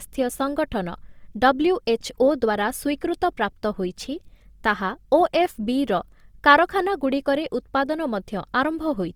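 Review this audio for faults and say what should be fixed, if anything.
Throughout the speech, vowels come out rough and grainy, with a noisy texture filling the spectrum rather than gaps. This is most likely Opus compression in its music (CELT) mode. Short of bits, the encoder keeps each band's energy but fills the detail with noise or folded copies of lower bands, which fits a low rate around 24 kbps. It differs from MP3 damage in having less swirling and fewer watery holes, and the top end still reaches about 20.3 kHz rather than sounding muffled. To prevent it, encode at a higher bitrate or keep an uncompressed master.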